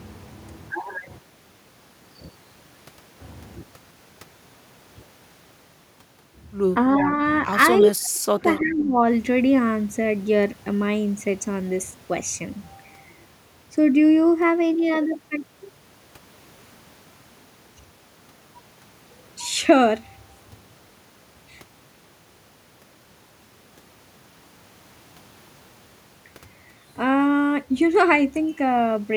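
An echo canceller on the far end likely failed to remove all of its loudspeaker pickup, so an echo leak sends brief delayed copies of the speech back 343 ms late: at 6.98–7.03 s and 7.81–7.86 s at about 15 dB below the speech, then at 8.03–8.10 s much fainter, around 30 dB down.

Right after, from 8.11 to 9.01 s, the canceller likely mistook both sides talking for echo and turned the talker down. This speech suppressed in double talk dips the voice by as much as about 35 dB in pieces across most of that stretch.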